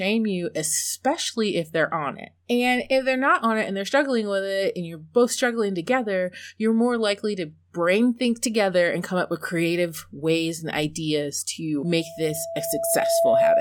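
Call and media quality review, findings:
Loudspeaker feedback squeal, 11.84–13.60 s, after "ways and ideas to": 667 Hz tone swells over about a second and a half, a few dB above speech. Mic–speaker loop gain exceeds unity.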